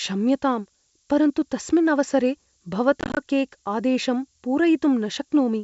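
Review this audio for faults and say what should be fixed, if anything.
A steady, thin hiss rising toward the top of the band runs throughout, roughly 25 dB below the speech. This is low bit depth with noise shaping, consistent with 8-bit samples. Keeping at least 16-bit resolution through the chain would prevent it.

From 3.01 to 3.18 s, packet loss on an ADPCM call leaves scattered holes adding up to about 100 ms, none longer than 20 ms, which fits roughly ten lost packets. After each hole the decoder's predictor is out of step, so the sound returns slightly distorted. Packet loss concealment that also resets the ADPCM state would prevent it.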